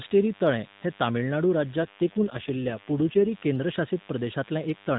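Speech carried over a narrowband mobile path, with nothing above 4 kHz, has a steady, thin DECT cordless phone buzz running under it for the whole clip. A nearby DECT handset or base pulses every 10 ms, and the audio circuitry rectifies those bursts into a 100 Hz tone with a dense harmonic series, sitting roughly 25 dB below the speech. From 1.80 s to 3.31 s, just after "तळें हें तमिळनाडू", there is an AMR rate drop. The band and continuity stay intact, but the speech turns rougher and more synthetic, which fits the codec stepping down from about 12.2 kbps to about 5.9 kbps to spend bits on error protection over a weak radio link, then recovering.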